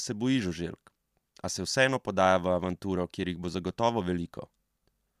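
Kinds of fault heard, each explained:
No technical faults can be heard in this speech.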